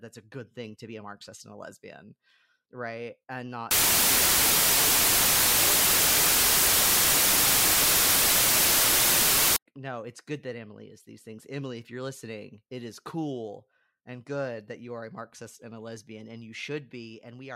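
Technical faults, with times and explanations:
3.71 to 9.56 s, wrong sample width: the speech drops into a harsh wash of loud noise with the real signal buried underneath, running at half speed and about an octave low. That fits 32-bit samples being read as 16-bit ones. Each true sample gets split into two values, so the count doubles and playback halves. The high-order halves keep a rough trace of the waveform, while the low-order halves come out as near-random noise.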